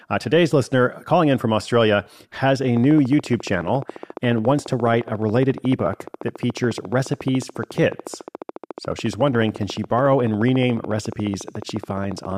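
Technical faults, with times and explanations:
2.77–12.33 s, train of clicks: a repeating impulse, likely from electrical interference or a faulty connection or power supply, injects near-identical pulses at a regular 14.1 per second, about 150 in all, peaking about 5 dB above the speech, heard as steady ticking from just after "has a" onward, through pauses too.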